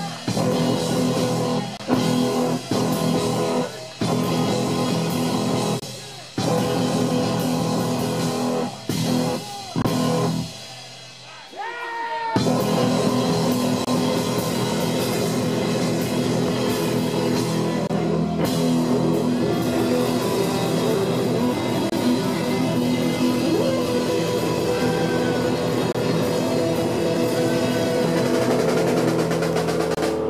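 There's a gap between chunks, about 25 ms of hard-edged silence at 1.77, 5.80, 9.82, 13.85, 17.87, 21.90, 25.92 and 29.95 s. Each 4-second chunk plays intact, but something leaves a hole at every join, so the sound keeps dropping out on a steady beat.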